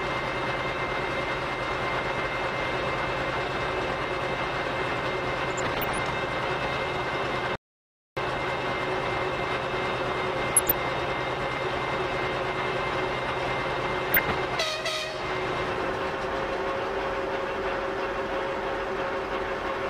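Weak DAB reception let bit errors slip past error correction into the MP2 data, so corrupted samples and scale factors throw individual sub-bands up and down frame by frame. This DAB burbling puts short blips of noise into single sub-bands at 5.51–5.98 s, 10.47–10.77 s and 14.09–14.32 s, at an error rate well under one percent. Separately, an audio dropout to silence, most likely the input briefly lost while recording continued, blanks the sound to total silence from 7.55 to 8.17 s, about 0.61 s with nothing left underneath.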